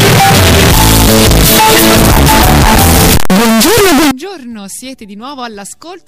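From 0.0 to 4.11 s, very loud harsh distortion where even quiet parts blast, unlike clipping; likely signed and unsigned mixed up, flipping the top bit.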